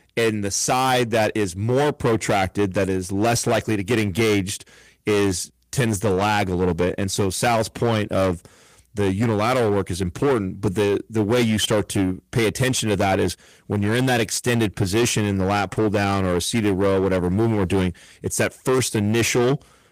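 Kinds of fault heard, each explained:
Hard clipping: throughout, the speech is driven about 12 dB past full scale, flattening a large share of peaks into a harsh fuzz on every loud syllable.
Lost packet rebuilt from error correction: at 6.15–6.21 s, between "engaged is tends to" and "a little bit", 40 ms is replayed from low-bitrate backup copies, which fits two packets. This sounds rougher and noisier, and the same happens again at 15.76–15.78 s.
Short concealed packet loss: at 15.73–15.78 s, after "position in the lat" and before "down or a seated", about 25 ms is filled by extending the preceding sound, giving a brief smear.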